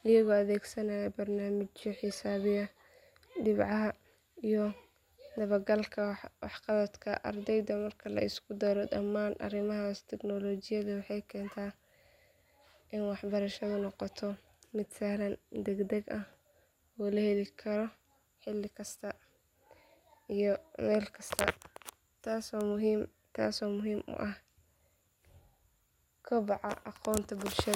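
No technical faults turn up anywhere in this recording. The speech continues without any audible interruption or disturbance from beginning to end.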